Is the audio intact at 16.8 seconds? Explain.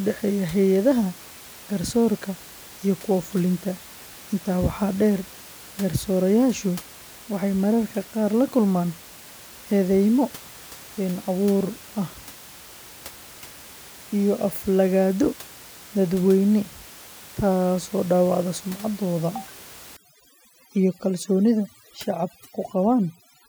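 Yes, the audio is intact at 16.8 seconds, with only the room's own background noise sitting about 21 dB below the speech.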